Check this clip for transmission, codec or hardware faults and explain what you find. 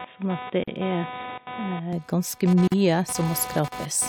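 Three faults are present in the speech: a constant hardware noise, a narrowed stretch at the start, and two brief dropouts.

Computer activity noise, throughout: load swings in the computer disturb the audio circuit's shared ground. The result is a buzzing, chirping texture pulsing at roughly 300 Hz, sitting about 15 dB below the speech and tracking the machine's activity rather than the talker.

Input switched to a poorer device, 0 to 1.93 s: the likely cause is the system recording from a lesser microphone or headset call profile before switching back. Nothing reaches above 3.8 kHz, so the speech sounds dull and boxy, with faint extra background noise about 45 dB beneath it. At 1.93 s it clears abruptly, with no silence or level jump.

Gap at a join of encoded pieces, 0.64 to 0.68 s (40 ms) and 2.68 to 2.72 s (43 ms): separately encoded segments were joined without trimming their start delay and end padding. 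Each join leaves a short silence, its edges smeared by the codec, before the speech resumes where it stopped. The 2.0 s spacing fits segments about two seconds long.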